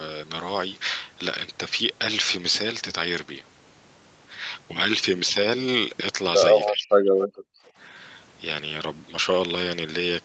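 From 6.7 to 6.95 s, the echo canceller likely mistook double talk for echo, causing speech suppressed in double talk: the speech drops by about 35 dB for roughly 300 ms.

At 7.19 to 7.28 s, an echo leak likely slipped past the far end's canceller, returning a short copy delayed 283 ms, roughly 10 dB below the speech.

From 7.28 to 7.73 s, the echo canceller clamped the microphone hard, so the background is gated by the echo canceller, sinking about 40 dB for roughly 400 ms before it returns.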